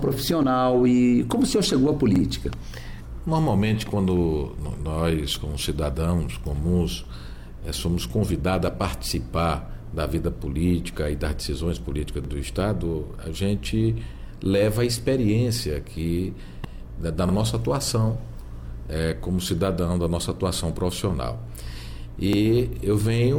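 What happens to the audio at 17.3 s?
Right around 17.29 to 17.33 s you get a quick stutter from overlapping chunks. The audio looks to have been handled in 5-second blocks, and at this join the new block starts a little before the previous one finished, so about 44 ms of sound gets played twice back to back. It comes across as a brief hiccup or click, a tiny repeated snippet sitting right on the chunk boundary.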